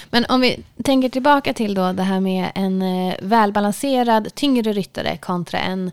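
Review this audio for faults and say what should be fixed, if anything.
No faults turn up in this audio, so nothing needs to be fixed.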